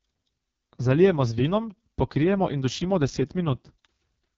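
From start to finish the speech carries AMR wideband (HD Voice) codec damage, and it's heavy: rough and raspy, which fits the lowest 6.6 kbit/s mode. The pulse-driven model is starved of bits, the top band is just shaped noise, and nothing reaches above 7.5 kHz.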